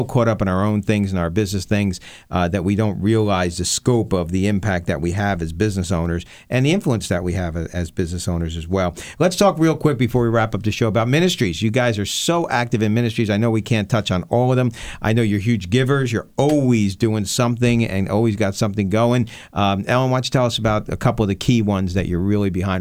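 A speech recording with an electrical switching spike from 19.27 to 19.29 s, right after "always got something going". It is a sharp snap or tight cluster of clicks about 20 ms long, peaking at a modest level of around -25 dBFS and laid over the speech. The likely cause is a nearby switch, motor or static discharge arcing into the audio line. Unlike a digital dropout or buffer glitch, the speech is not cut or interrupted. The burst simply sits on top of it.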